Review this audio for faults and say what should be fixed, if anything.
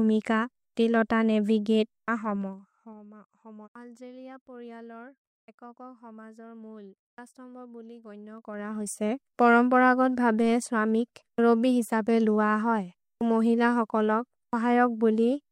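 Zipper noise occurs twice: from 2.22 to 3.04 s, as the level falls by roughly 20 dB, and from 8.24 to 9.02 s, as it rises by about the same amount. The gain moves in 2 dB jumps, about twenty per second, with no interpolation between them. Each jump is a small discontinuity in the waveform, heard as a rapid ticking riding on the speech during each fade. To prevent it, interpolate gain per sample or apply a short smoothing ramp across each update.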